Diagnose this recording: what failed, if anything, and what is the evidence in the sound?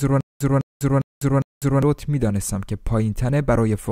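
Stutter with silent gaps runs from the start of the speech clip, already under way, until 1.83 s. A fragment of about 206 ms repeats four times, each followed by about 199 ms of digital silence, giving an even cycle of roughly 405 ms. The stage is playback or streaming: the likely cause is a stalled player or stream buffer that, on each retry, replayed its last fragment and then ran dry, so the speech due in those gaps is lost.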